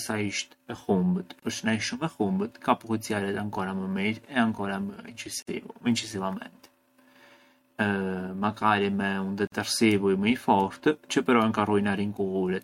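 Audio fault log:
1.40–1.42 s, 5.42–5.47 s, 9.47–9.52 s: gap at a join of encoded pieces. Speech drops out for 29, 49 and 49 ms, every 4 s (after "sa isht e humbët" and "me un"). These look like separately encoded chunks spliced untrimmed, so encoder start delay and last-frame padding leave smeared silences before the speech picks up where it stopped.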